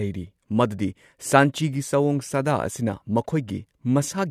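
No technical faults can be heard anywhere in the recording.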